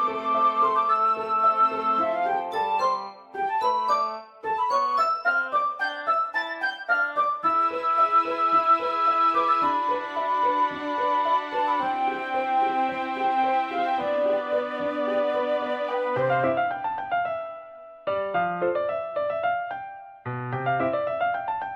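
Throughout the clip, the sample rate was raised from 22 kHz to 44.1 kHz by linear upsampling, which joins neighbouring samples with straight lines and filters poorly. Imaging from linear upsampling results: the top of the original band is dulled, and a mirrored copy of the spectrum sits between about 11 kHz and 22.05 kHz, roughly 40 dB below the signal. It adds a faint metallic shimmer to the brightest parts of the sound.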